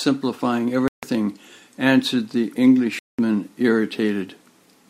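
Bluetooth stalls at 0.88 s and 2.99 s cut the speech to silence for about 0.15 s and 0.2 s, then resume where it stopped. Likely cause: interference delayed packets, so the headphones' buffer emptied and playback waited for the resent audio.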